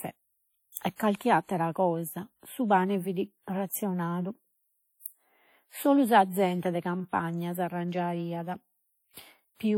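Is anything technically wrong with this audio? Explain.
Yes. Throughout the speech there is plainly audible transform-codec damage, likely WMA compression, and the ringing, washy hiss fits a bitrate around 48 kbps. A spectrogram shows patchy, holed upper bands.

From 0.96 to 1.00 s there is pre-echo. Block noise smears about 39 ms ahead of an attack, visible as short hiss before the waveform's onset.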